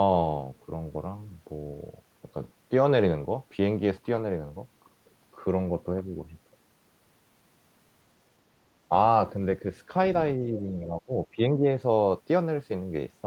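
A speech clip with speech suppressed in double talk, twice: from 10.52 to 11.11 s and from 11.32 to 11.65 s, the voice sinks by about 10 dB for a few hundred milliseconds in total. The likely cause is an echo canceller mistaking the talker for loudspeaker echo while the far side speaks. Unlike packet loss, the sound dips rather than breaking up with clicks or repeats.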